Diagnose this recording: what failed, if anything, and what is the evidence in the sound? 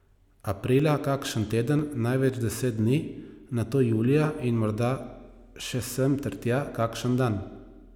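The failure is at the driver or buffer stage: periodic USB or driver dropouts. From 0.30 s to 2.79 s the speech carries a regular tick every 0.5 s, about seven in all. Each is a tiny skip of well under a millisecond, so no gap is heard, only a click. The regular spacing points to a background task that stalls the USB bus or audio driver on a timer, so a few samples are lost each time.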